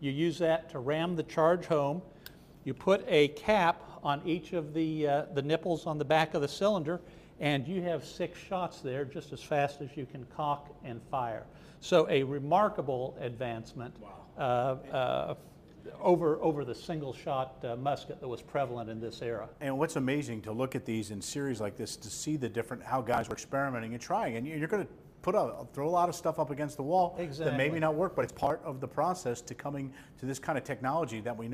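From 23.14 to 23.38 s and again from 28.22 to 28.50 s, processor overload crackle tears through the audio. The skips come close together, each about 10 ms long, as missed buffer deadlines pile up. That sets this apart from a single clean dropout.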